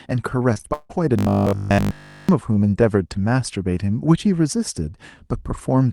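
From 0.53 to 0.91 s the speech breaks up with repeated packet loss, giving a robotic sound. Four gaps fall in this stretch, the longest 159 ms, and each is patched by stretching the last audio, so more than half the span is concealed rather than real and sounds choppy.

From 1.19 to 2.29 s the speech turns into a rigid, metallic buzz at 50 Hz, a robotic sound likely from repeated short buffers. Repeating the same 20 ms fragment essentially throughout imposes that fixed pitch while the real audio is skipped, leaving only a rough outline of the speech. The call path's Opus coding is audible as a top end that stops near 12 kHz.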